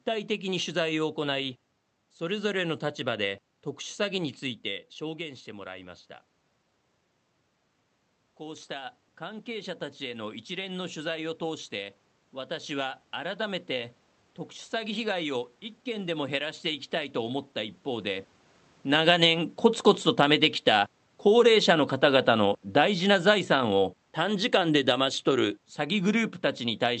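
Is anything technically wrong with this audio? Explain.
Yes, there are two automatic gain control faults.

From 8.39 to 13.97 s, automatic gain rises. After the input level falls by about 12 dB, likely the talker moving back, the control slowly adds about 7 dB, swelling voice and room noise together.

From 20.06 to 26.25 s, automatic gain falls. The control judges the input too loud and pulls gain down by about 7 dB, so speech and background sink together.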